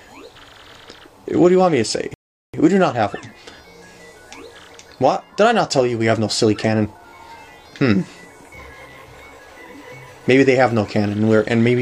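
At 2.14 s the audio drops to silence and stays there until 2.54 s. This is a rebuffering stall. The player ran out of downloaded audio and waited for more. Playback then resumes exactly where it stopped. Nothing is lost, but about 0.4 s is added.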